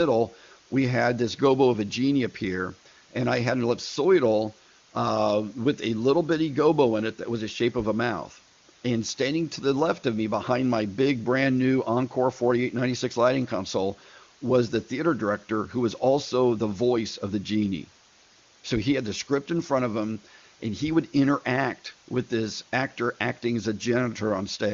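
From start to finish the signal is carried at low bit depth with dither, consistent with about 7 bits, and randomised before rounding. The quantisation error becomes a steady, even hiss roughly 25 dB below the speech, without distortion, sitting over the clear, band-limited AMR wideband coding.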